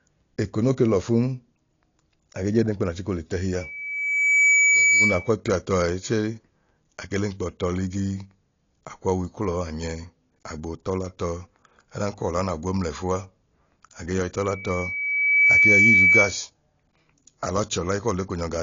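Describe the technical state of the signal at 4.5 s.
At 4.5 s you're right in the middle of a loudspeaker feedback squeal that runs from 3.6 to 5.31 s. A mic is catching the speaker it feeds, and at 2.3 kHz the loop gain tips past one, so that tone keeps feeding itself. It swells over roughly a second into a steady whistle, and by this point it's sitting something like 10 dB above the speech before it cuts out just after 5.3 s.

Underneath, the whole clip sounds dull and a bit smeared, and at this moment the speech carries the same plainly audible damage. There's nothing above 7.2 kHz, and sibilants have that fizzy, warbly texture. That's likely AAC compression, specifically AAC-LC pushed hard. The encoder throws away the top of the spectrum and coarsely quantises what's left, which points to a low bitrate somewhere around 32 kbps.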